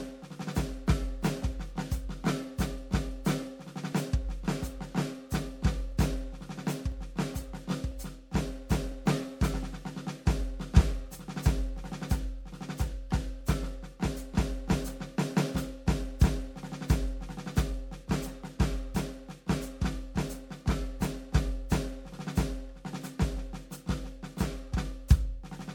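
A music clip with generation loss throughout: it sounds swirly, hollow and smeared, with blurred attacks, likely from roughly four passes through a lossy MP3 coder, fitting around 96 kbit/s. A spectrogram shows a hard ceiling at 19.5 kHz and speckled spectral holes, and waveform transients look softened.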